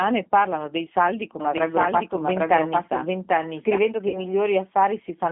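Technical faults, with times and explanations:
Throughout, G.729 codec. The speech is squeezed into a narrow phone band of about 200 Hz to 3.4 kHz at 8 kbit/s. The decoder rebuilds each short frame from a filter, a pitch guess and a few pulses. The damage is plainly audible as a rough, synthetic edge.
1.40 to 3.78 s, doubled audio track. Just after "parlano dei saldi", a second copy of the speech enters abruptly, about as loud as the first and trailing it by roughly 0.7 s. It has no reverb or room colour. The likely cause is a slower second capture path mixed back in.
4.08 to 4.26 s, VoIP packet loss concealed by the speech codec. About 60 ms of audio is missing, which fits three 20 ms packets. The decoder stretches its last pitch and filter into a sound that fades. The voice stays weak briefly after packets return.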